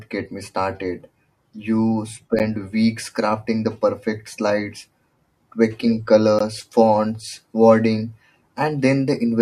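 Speech, with a gap between stream segments at two boundaries 4 s apart. The segment timestamps fail to meet, and the player fills each gap with silence. That leaves hard-edged dropouts of about 11 ms at 2.39 s and 17 ms at 6.39 s, with no audio lost.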